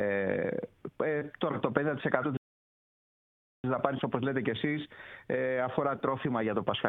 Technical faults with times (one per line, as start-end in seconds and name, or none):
2.37-3.64 rebuffering stall